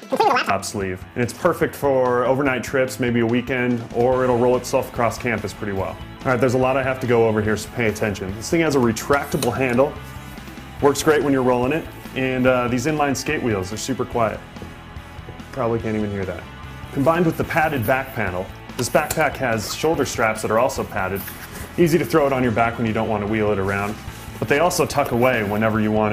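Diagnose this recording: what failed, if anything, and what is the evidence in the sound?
Audio read two samples at a time (double speed), a sample-format conversion slip: from 0.0 to 0.5 s everything runs twice as fast and a full octave up.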